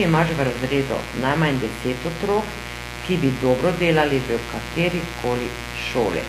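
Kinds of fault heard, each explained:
Mains buzz: A steady, raspy buzz runs under the speech for the whole clip, not far below it in level. Sharp switching spikes arrive twice in every 60 Hz mains cycle and leak in, piling up harmonics that reach into the kilohertz range.
HE-AAC compression: The s sounds come out gritty and lispy, and the treble is artificial, with nothing above 14.9 kHz and plainly audible damage throughout. The likely cause is HE-AAC rebuilding the top end from copied lower bands, which fits a bitrate around 24 kbps.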